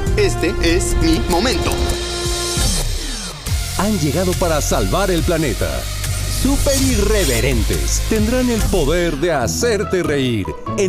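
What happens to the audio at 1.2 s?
Right around 1.16 s there's a tiny burst of damaged data in a compressed stream, lasting only about 14 ms. A stretch of the encoded bytes got corrupted, so the decoder couldn't make sense of the frame there, lost its sync, and had to hunt for the next valid frame header before carrying on. What comes out is a quick, glitchy chirp or blip that cuts across the audio, then playback picks back up.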